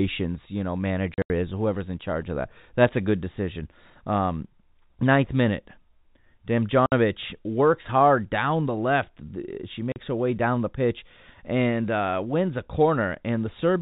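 Packet loss filled with silence cuts holes in the speech at 1.14 to 1.3 s (about 120 ms gone across 160 ms, longest gap 80 ms), at 6.86 to 6.92 s (60 ms) and at 9.92 to 9.96 s (40 ms). Each gap is silence with abrupt edges and no fade. The lengths all step in 20 ms units, which fits 20 ms packets. That regular stepping and the absence of any concealment or smearing set this apart from signal dropouts or noise-gate chopping. The speech runs over the G.711 telephone path, so it is band-limited to 4 kHz.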